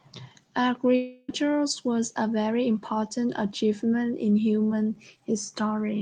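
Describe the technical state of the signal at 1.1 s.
Incoming audio likely stopped arriving from 0.95 to 1.30 s, a long network dropout that covers 1.1 s. The receiver stretched the last sound into a fading buzz for 330 ms, leaving 20 ms of silence before the speech resumes with that stretch missing.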